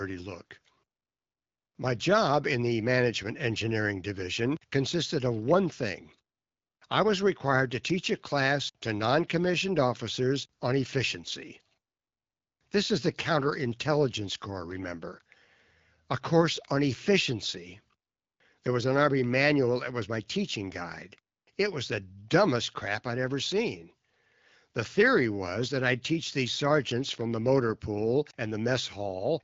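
No technical faults can be heard anywhere in the speech. It comes through an AMR wideband (HD Voice) codec at 12.65 kbit/s, a rate where this coding leaves only light traces on the sound.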